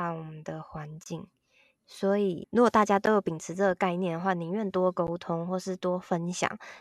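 It's a speech clip with a gap at a join of encoded pieces, recurring every 2 seconds: a 23 ms dropout from 1.04 to 1.06 s, then shorter 11 ms ones at 3.06 s and 5.07 s. The speech simply stops and resumes where it left off, with smeared edges. Looks like the audio was encoded in separate chunks and butted together untrimmed, so each encoder's start-up delay and last-frame padding stayed in as silence.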